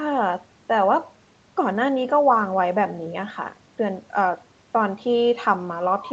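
No technical faults occur in this speech, which has passed through the normal microphone processing of a call.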